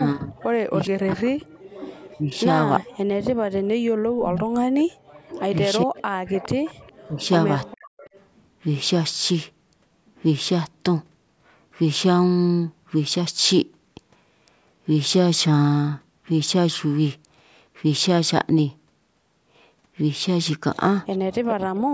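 Speech, with the talker's level repeatedly pulled down between 0.0 and 7.93 s, for roughly three seconds in total, with the deepest dips of about 40 dB. This is speech suppressed in double talk, likely an echo canceller attenuating both sides while far-end audio was present. A delayed copy of the voice, trailing by 412 ms, appears from 0.4 to 2.84 s and from 5.29 to 8.23 s at about 20 dB below the speech, and again from 21.12 to 21.78 s at about 10 dB below. This is echo leak, likely residual loudspeaker pickup that the far-end canceller failed to remove and sent back.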